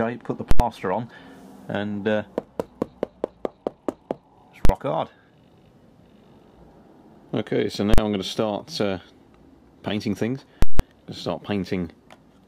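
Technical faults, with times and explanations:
0.51–0.60 s, 4.65–4.69 s, 7.94–7.98 s, 10.62–10.80 s: invalid numbers at full scale. A calculation produced invalid values that were pinned to the maximum output level for a whole processing block: about 85, 43, 43 and 171 ms, which fits 4096-, 2048- and 8192-sample blocks. This differs from ordinary clipping because no program sound remains in the block. The longest gives a loud pop at each edge with dead silence between, while the 43 ms blocks land as single bangs.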